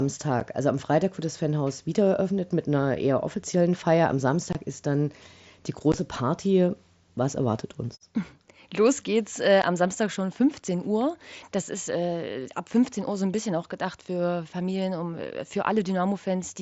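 Unconcealed Bluetooth headset packet loss opens abrupt silent holes at 0.40 s, 4.53–4.55 s before "ist dann die", 5.92 s after "ist dann die", and 9.62 s after "geht's äh", lasting 7.5 to 22.5 ms. These are abrupt dropouts rather than the smeared, repeated sound of concealed loss.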